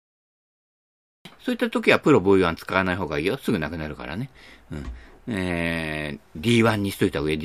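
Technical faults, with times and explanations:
0.00–1.25 s, cut-off start: the first 1.25 s is dead digital silence, with no room tone or noise floor at all, and then the speech appears abruptly at 1.25 s, already mid-sound, with no natural onset or fade-in to lead into it. That hard edge is the sign of a recording or stream that began capturing late, so the real beginning of the speech was never recorded and the gap before it was filled with silence.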